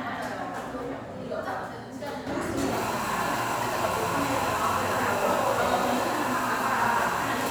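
A sudden gain jump at 2.27 s lifts the sound and its background noise together by about 7 dB until the end. The likely cause is digital gain applied instantly, without a ramp.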